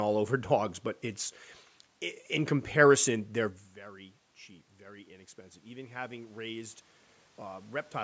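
A recording of speech in which, right after "comparison they're very cheap", the voice and the room noise behind it swell together from 4.78 to 6.82 s. That is automatic gain rising. The input level had fallen by about 16 dB after the talker moved back from the microphone at around 3.5 s, so the gain control slowly raised its gain by about 5 dB to compensate.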